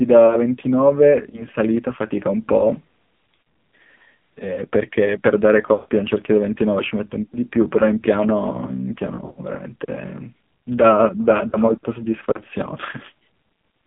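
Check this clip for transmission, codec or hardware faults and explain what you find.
Two faults stand out, both from a mobile call path.

The whole clip carries the AMR narrowband mobile codec. The band runs only from 150 Hz to 3.6 kHz, and the speech is heavily buzzy and synthetic. The codec rebuilds the voice from a vocal tract model and a few pulses, and at this damage level it sounds like one of the lowest modes, around 5.9 kbps.

Lost AMR speech frames show up seven times: 1.30–1.45, 3.36–3.52, 5.74–5.89, 7.24–7.35, 9.16–9.39, 11.48–11.59 and 12.98–13.02 s. Each frame is 20 ms, so the short dips at 1.3 and 13.0 s sound like single lost frames. When a frame fails its check, the decoder repeats the last pitch and tract settings at falling gain. The 5.74 s gap, around 140 ms long, stretches and fades out, while 3.36 and 9.16 s break up into warbly stutters.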